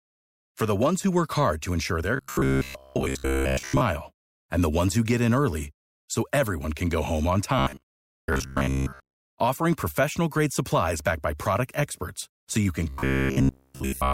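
Robotic sound from repeated short buffers hits this speech at 2.16–3.81 s after "hard to ensure their", at 7.59–9.23 s after "can go home on" (before "offering professional grade supplies"), and at 12.89–14.13 s after "experts so you can". The voice turns into a rigid buzz near 66.7 Hz, likely from one 15 ms chunk looping while new audio arrives too seldom. The first two passages are mostly repeats, and the last is entirely repeats.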